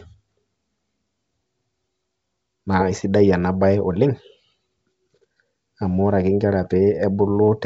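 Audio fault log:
2.95–3.02 s and 6.66–6.71 s, bit errors on an ADPCM link: two short rough bursts in the G.722 stream at 64 kbit/s, the first lasting about 70 ms and ending just before "ena bae", the second about 50 ms. Flipped bits corrupt the ADPCM codes, and since each code also updates the decoder's step size and predictor, the error rings on for milliseconds as pops, grit and brief level jumps. The first burst is denser, at a few errors per thousand bits, against roughly half that in the second.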